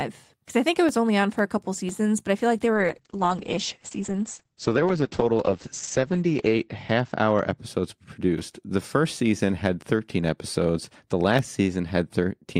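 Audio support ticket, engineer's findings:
Speech turns muffled and rough 2.74–8.07 s, highs gone above 8 kHz. Call bitrate drop: encoder cut from 48 to 9 kbps, lowest for 3.5 s, coarser coding.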